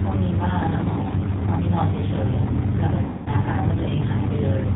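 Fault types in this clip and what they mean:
G.729 codec: The entire clip passes through this low-rate voice codec, and the damage is plainly audible. Speech is rebuilt from a vocal tract filter, a pitch predictor and a few pulses per 10 ms frame, so the voice sounds rough and slightly synthetic, and nothing above 4 kHz is present. Unlike simple band-limiting, the roughness comes from the model itself, a texture consistent with roughly 8 kbit/s coding.
mains hum: From about 2.23 s to the end, a steady 60 Hz tone sits under the speech, fairly strong at about 10 dB below the speech level. Power-line current leaking into the signal, for example through a ground loop, causes it. The pitch stays fixed and the level stays constant regardless of the talker. That sets it apart from low-frequency rumble or codec buzz, which shift with the sound.
VoIP packet loss concealed by the speech codec: From 3.04 to 3.30 s, about 220 ms of audio goes missing, which fits a run of lost 20 ms packets. 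The decoder fills the gap by extending its last pitch and filter with falling gain, so the voice smears into a fading buzzy tone or coloured noise. Because each frame builds on the previous one, the speech stays weak briefly after the gap. A plain dropout would instead be silent or clicky.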